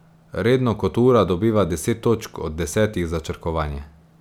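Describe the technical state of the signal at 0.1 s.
At 0.1 s the speech signal is intact, with no audible dropout, distortion, glitch or other technical fault at that point.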